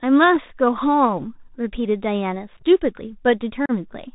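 Speech that sounds narrow, scratchy on s sounds and grainy throughout, with nothing above 4 kHz: the plainly audible damage of a Bluetooth CVSD headset codec, whose 64 kbit/s one-bit delta coding cannot follow loud, fast high content. Brief holes and a chopped, crackly moment at 2.57 to 2.62 s, where about 22 ms drop out in short gaps across roughly 50 ms, and a longer loss of about 34 ms at 3.66 to 3.71 s come from unconcealed Bluetooth headset packet loss. Lost voice packets were replaced by silence or an idle pattern rather than concealed, and the second loss points to around ten packets lost.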